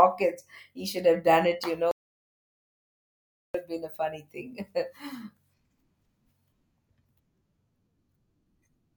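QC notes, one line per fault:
1.91–3.54 s, audio dropout to silence: the speech cuts off mid-flow and the signal falls to silence for about 1.63 s, with no room tone or noise floor underneath, before the speech resumes abruptly. The dead-flat gap most likely comes from the input path being lost while the recorder kept writing silence, through a disconnected device, a failed link or an accidental mute. Whatever was said during that stretch is unrecoverable.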